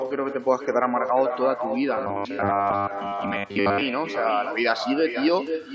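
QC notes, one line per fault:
Throughout: echo with no canceller. Every phrase returns about half a second later at about 8 dB below the original, thinner, as the far end's loudspeaker feeds its microphone. On a spectrogram each speech burst has a fainter delayed duplicate trailing it.
1.97–3.83 s: robotic sound from repeated short buffers. The sound turns into a rigid metallic buzz fixed at 100 Hz that still loosely tracks the speech, likely because new audio arrived too seldom and most of it was replaced by repeats of a roughly 10 ms segment. The spectrogram shows evenly spaced 100 Hz harmonic stripes, and the waveform shows identical repeating cycles.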